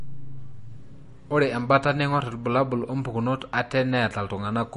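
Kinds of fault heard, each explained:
MP3 compression: Throughout the clip the speech has nothing above about 10.6 kHz, a hard treble ceiling. The coding damage is plainly audible. Such a cut is set by an encoder that runs short of bits and discards the top band, while weaker frequency lines below are zeroed from frame to frame. The likely cause is MP3 encoding at a low bitrate, which fits roughly 40 kbps.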